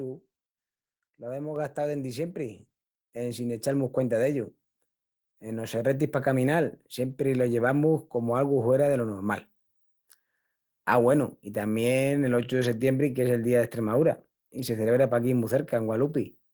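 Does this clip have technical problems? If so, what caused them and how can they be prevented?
Yes. At 1.56 s, just before "gastau dendi", the speech and background jump up together by about 4 dB: a microphone volume stepped up event, where the call software judged the input too quiet and raised the device gain in one step. Turning off automatic mic-level adjustment prevents it.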